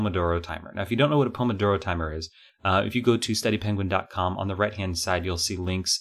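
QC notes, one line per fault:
0.49 s and 2.50 s: dropped buffer (overrun). Each point has an abrupt jump forward in the speech and no gap of silence, as if a short slice has been cut out and the two edges butted together. Around 20 ms goes missing each time. The likely cause is the capture side failing to collect a buffer before the hardware overwrote it.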